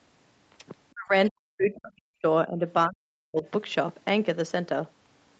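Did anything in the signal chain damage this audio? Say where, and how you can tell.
Yes. The damage is in the call processing stage, likely the echo canceller clamping down during double talk, which is speech suppressed in double talk. The speech ducks hard at 0.93–1.12 s, 1.28–2.25 s and 2.87–3.45 s, dropping by about 40 dB, and more gently, about 10 dB, at 2.47–2.62 s. Those gated holes are the canceller mistaking the talker for echo. The band topping out near 8 kHz just reflects the Opus call path.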